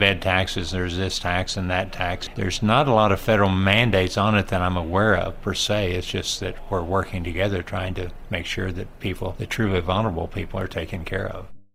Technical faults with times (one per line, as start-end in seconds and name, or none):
7.76-11.74 adaptive stream at a lower bitrate